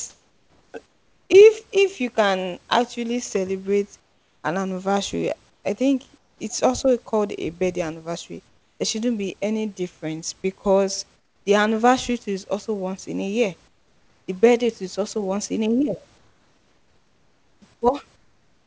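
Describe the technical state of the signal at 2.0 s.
At 2.0 s the signal is intact, with nothing to hear beyond the expected band limit of the call path and faint room noise well beneath the speech.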